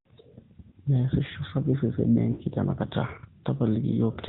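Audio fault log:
Throughout: AMR narrowband mobile codec. The audio is capped below 4 kHz and carries a plainly audible buzzy, synthetic edge from the vocal-tract model driven by sparse pulses. The degree of coarseness fits a mid-rate mode of about 10.2 kbps.
0.70–0.76 s and 2.32–2.43 s: lost AMR speech frames. Sound gaps of 40 ms and 80 ms fit two and four missing 20 ms frames. The decoder stretches the last good pitch and vocal-tract settings with falling gain, giving a drawn-out, fading warble.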